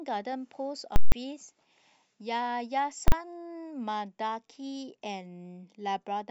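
At 0.96 to 1.12 s and again at 3.08 to 3.12 s, invalid numbers at full scale pin the speech to the rail. The 160 ms block gives a loud pop, flat silence, then another pop. The 40 ms block gives one bang. Waveforms show flat slabs far beyond the speech peaks, spectrograms broadband vertical edges.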